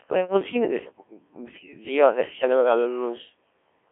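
Codec 2 vocoder throughout: the speech is resynthesised from pitch and spectral envelope, sounding buzzy and robotic, with nothing above 3.5 kHz, at a rate near 1.3 kbit/s.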